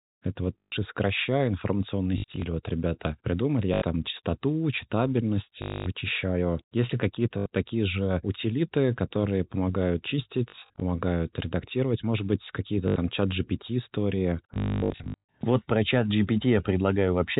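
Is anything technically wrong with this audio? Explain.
Yes, the speech keeps stuttering from packet loss with the last packet repeated. It happens at 0.58–0.72 s, 2.18–2.42 s, 3.74–3.82 s, 5.62–5.86 s, 7.38–7.46 s, 10.5–10.82 s, 12.88–12.96 s, and worst at 14.54–15.34 s, which includes a 240 ms run. When packets go missing, the receiver just replays the last one. Those repeats don't line up with the pitch, so you get a robotic 50 Hz buzz, which fits 20 ms packets. The telephone-band G.711 coding underneath sounds like normal narrowband phone audio.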